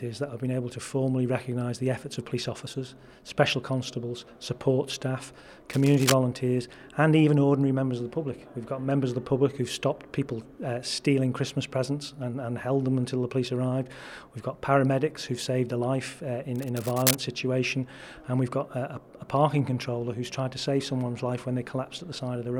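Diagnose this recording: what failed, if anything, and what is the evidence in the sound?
Analogue wiring: cable scratch noise, dense uneven crackle at 5.70–6.15 s and 16.55–17.15 s, likely a worn contact shifting. These are ragged bursts, not isolated clicks.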